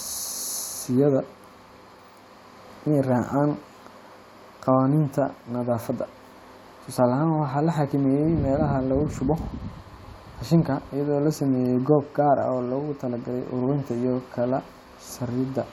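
No technical faults can be heard anywhere here.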